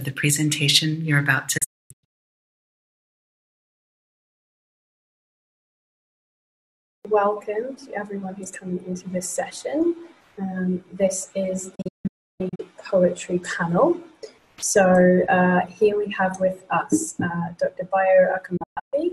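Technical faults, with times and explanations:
1.58 to 2.36 s, 11.75 to 12.60 s and 18.57 to 18.94 s, digital broadcast dropout: the receiver lost valid frames and muted, with 8 ms fades into and out of each gap. The sound drops out in several short holes: 544 ms missing across 768 ms, then 608 ms across 832 ms, then 288 ms across 352 ms, with gaps of up to 320 ms. The gap lengths fit frames of about 32 ms. Each gap looks like a flat line on the waveform and a blank vertical band on the spectrogram.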